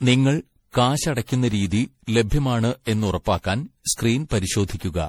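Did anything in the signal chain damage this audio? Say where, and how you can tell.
Yes. Generation loss runs through the whole speech clip. The damage sits at the codec stage: the sound is swirly, smeared and hollow beyond what a single lossy pass would leave, and consonant attacks are blurred, which fits MP3 at around 64 kbit/s. The likely cause is repeated decoding and re-encoding, perhaps seven times, with each pass quantising again on a shifted frame grid so noise and spectral holes accumulate. The band still extends to about 20.5 kHz.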